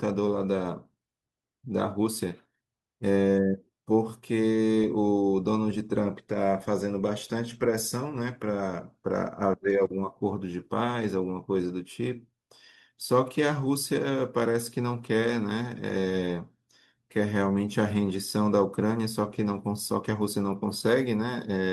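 A stretch of recorded speech, and there's nothing technically wrong to report anywhere in it.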